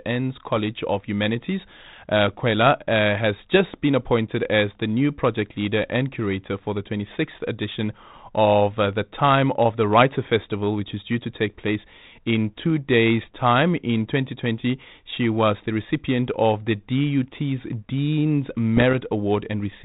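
Bit errors on an ADPCM link cause a pop at 0.56 s and rough bursts from 18.77 to 18.94 s. Flipped bits derail the decoder.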